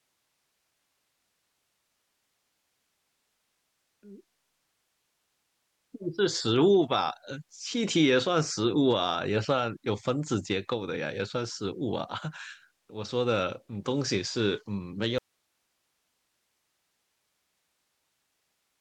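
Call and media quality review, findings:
Audio dropout to a faint residue at 15.18 s, running to the end: speech cuts abruptly, leaving only hiss around 50 dB down. Likely the capture source lost, downstream path still live.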